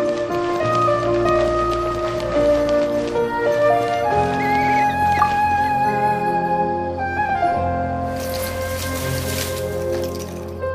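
From 7.15 s to 10.03 s a mains buzz sits under the sound, roughly 20 dB below it. Switching spikes from a dimmer, rectifier or unshielded line are leaking in twice per 60 Hz cycle, spraying harmonics of 60 Hz up into the kilohertz range. What separates it from plain hum is that raspy, edgy texture. A clean hum would be a smooth, low 60 Hz tone without the bright upper harmonics.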